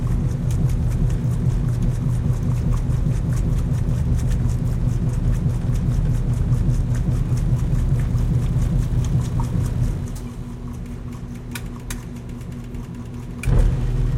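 At 13.10 to 13.12 s, compressed frames are skipped. Whole frames never play, so the sound jumps ahead by about 20 ms at one audible join.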